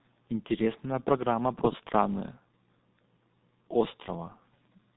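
A speech recording carrying G.723.1 codec damage from start to finish. Nothing reaches above 3.8 kHz, so the sound is muffled, and consonants smear because each 30 ms frame is coded from a slowly updated voice model, leaving a hoarse, rough texture that fits a rate of around 6 kbit/s. A simple low-pass filter would dull the top end while keeping the voice smooth; this coder adds graininess inside the band.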